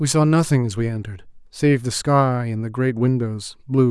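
No audible technical faults.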